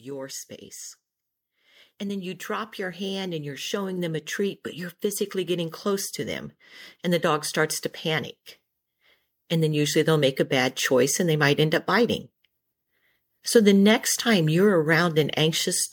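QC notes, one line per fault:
1.98–8.36 s and 9.49–11.54 s, automatic gain rising: the gain control decides the input's too quiet and slowly turns it up, about 10 dB over the first stretch and about 4 dB before "end up biting", so speech and background swell together.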